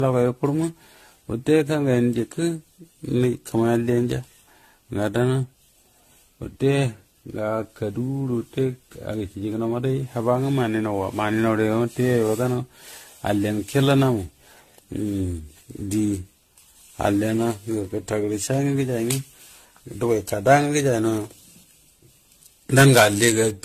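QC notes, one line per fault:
Throughout, generation loss: the speech has a swirly, hollow, smeared quality beyond what a single 64 kbit/s AAC-LC pass would leave, and consonant attacks go soft. Likely it's been decoded and re-encoded around ten times, each pass quantising on a shifted frame grid so the noise and spectral holes pile up. Nothing comes through above about 14.1 kHz, which fits that codec setting, and the whole thing has that washed, watery edge.
22.78 to 23.30 s, hard clipping: for about half a second near the end the peaks get chopped flat, roughly 10 dB past what the stage could pass. Those squared-off tops throw harmonics way up the spectrum, so instead of the odd crackle you get a harsh fuzz riding on every loud syllable in that stretch. It's short, a gritty burst right before the clip ends.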